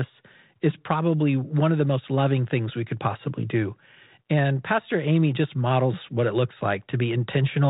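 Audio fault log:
No faults heard.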